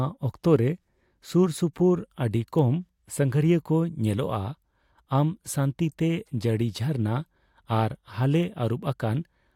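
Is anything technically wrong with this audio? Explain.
Yes. The speech carries two bit error spikes, one at 2.59 s and one at 8.43 s. Each is a single corrupted sample. A bit flipped in storage or on a digital link, so that sample's value leapt by a power of two and then fell straight back. Because the jump lasts one sample, its energy spreads across the whole spectrum. Each one sounds like a brief, sharp tick. Neither tick has anything to do with the speech around it.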